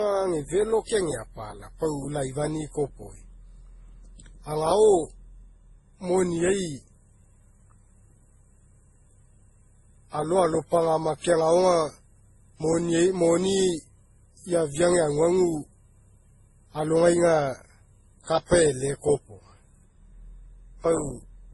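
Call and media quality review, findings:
Speech, whole clip: band stops at about 11.5 kHz, with several flavours of codec mush stacked on top of each other, all the way through. Likely transcoding between lossy codecs, something like WMA into Opus into MP3, at rates that sound like roughly 24 to 32 kbit/s. Each pass re-encodes the last one's artefacts and adds its own, and the lowest cut-off in the chain sticks.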